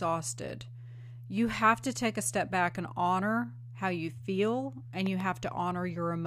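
A speech recording with a loud pop fault: right after "how you feel and", from about 5.06 to 5.22 s, two sharp pops land on top of the speech, which carries on underneath. They peak roughly 10 dB above the surrounding signal. On a waveform they show as two tall spikes standing well above the speech envelope; on a spectrogram, as two thin vertical broadband stripes. The likely cause is a sudden voltage step, such as a plug, switch or static discharge, shaped by the circuitry downstream.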